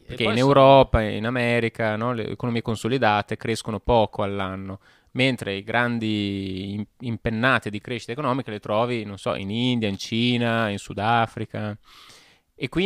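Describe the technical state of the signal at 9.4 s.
At 9.4 s the speech signal is intact, with no audible dropout, distortion, glitch or other technical fault.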